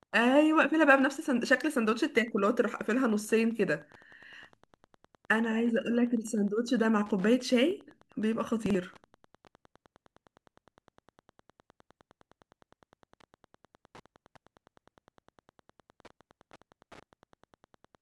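Wi-Fi interference runs through the whole recording: a nearby radio's beacon, repeating every 102.4 ms, is rectified by the audio circuit and heard as a faint steady tick roughly ten times a second, sitting around 35 dB below the speech.

At 8.66 to 8.75 s, chunks out of order: a segment of about 43 ms was written one chunk late, so it plays after the segment that should follow it. The speech sounds briefly jumbled.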